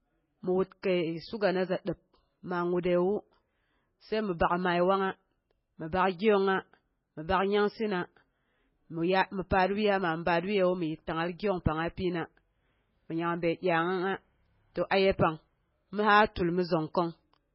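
From the first second to the last, the speech has the watery, swirly quality of heavy MP3 compression, likely from a very low-bitrate encode, with the sound pointing to something around 16 kbps. Starved of bits, the encoder has chopped off everything above about 5.5 kHz, so the top end is dull, and the weaker frequency lines flicker in and out between frames. That's where the warbly, metallic edge on sibilants and the smeared consonant attacks come from.

At 14.90 s there's a quick pre-echo, a hiss lasting about 14 ms, right before "aye pang". The attack landed late in a transform block, and because the codec spreads its quantisation noise across the whole block, the noise sized for the loud onset bleeds into the quiet moment just ahead of it. You hear a short smear of noise leading in, and the onset itself comes out softened rather than crisp.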